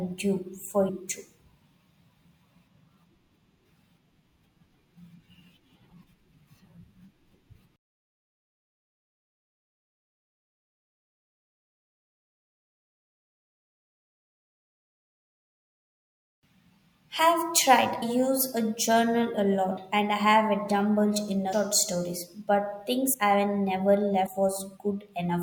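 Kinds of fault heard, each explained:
Compressed frames skipped: whole blocks of the coded speech never reach the output, so the audio jumps forward by a multiple of the codec's frame length, which here fits a 24 ms frame. This happens at 0.88, 18.01, 19.77, 21.52, 23.13 and 24.25 s. The gaps run from under a tenth of a second to about a fifth of a second of lost speech.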